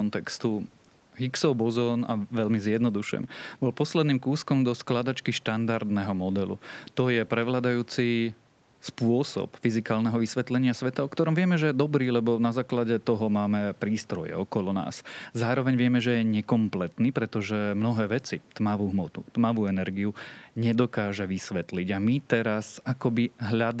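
Nothing stood out on listening to this speech recording.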